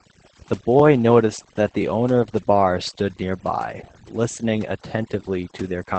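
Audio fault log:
throughout, overdone noise removal: background drops and breaks up into twinkling specks, and quiet speech components are gated away with it.
throughout, Opus voice compression: nothing above 8.6 kHz, with plainly audible hoarse, slightly robotic coarseness from low-rate linear-prediction coding, which fits SILK wideband at around 12 kbps.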